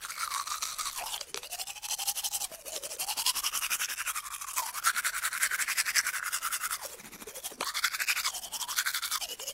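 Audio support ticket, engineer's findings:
No faults found on listening: levels steady, no dropouts, clicks, distortion or timing errors anywhere in the signal.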